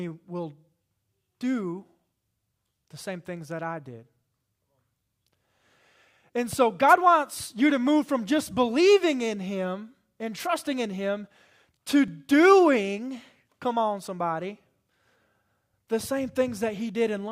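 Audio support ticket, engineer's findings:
Wireless microphone noise hit at 6.88–6.94 s, just before "wants you to move", and 10.38–10.47 s: brief static swish, RF multipath fade raising receiver noise. Spectrogram shows broadband hiss patches.

Overlap between stream segments at 8.09 s, between "wants you to move" and "just believing in", and at 12.08 s: tiny skip where trimmed audio makes the waveform jump. Spacing fits 2 s segment boundaries.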